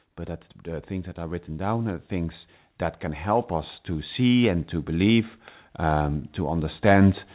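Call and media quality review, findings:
Automatic gain rising, 0.05 to 2.47 s. Voice and background swell together by about 5 dB before "that can". AGC raising gain on quiet input. Again from 3.23 s to the end after "that can". Band stops at 4 kHz, consistent with the G.711 call path.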